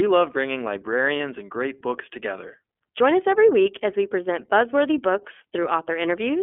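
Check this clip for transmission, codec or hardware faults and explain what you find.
Two faults are present: the whole recording has passed through the iLBC codec, and there is a short dropout from lost iLBC frames early on.

iLBC codec damage runs through the full length of the speech. The band is limited to roughly 250 Hz to 3.4 kHz, so there is no low bass and nothing above telephone bandwidth. Each frame's excitation is coded independently, and the block structure fits 30 ms frames at a rate that points to about 13.3 kbps. The resulting damage is plainly audible: the voice is intelligible but rough, with a grainy, synthetic edge.

Lost iLBC frames cause a brief concealment event from 1.17 to 1.21 s, about 30 ms long, which is consistent with a single dropped packet. For that missing stretch, the decoder repeated the last pitch cycle mixed with noise instead of decoding real audio. 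The gap is heard as a short held, slightly buzzy vowel-like sound. Because iLBC frames do not depend on earlier ones, normal decoding resumes immediately afterwards with no lingering smear.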